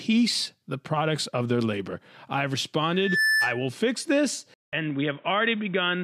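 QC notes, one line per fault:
2.93 to 3.70 s, loudspeaker feedback squeal: a single tone at 1.8 kHz swells up over roughly a third of a second and sits about 5 dB above the speech. The mic is picking up its own loudspeaker, and at that frequency the loop gain tops one, so it feeds itself.
4.54 to 6.04 s, input switched to a poorer device: after a gap of about 190 ms the sound goes dull and boxy, with nothing above 3.8 kHz and a new noise floor roughly 30 dB down, level about unchanged. Likely the input jumped to a narrower-band mic or headset call profile.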